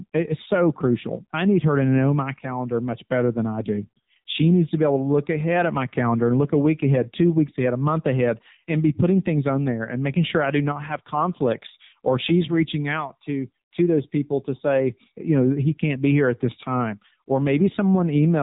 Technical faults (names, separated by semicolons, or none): AMR narrowband mobile codec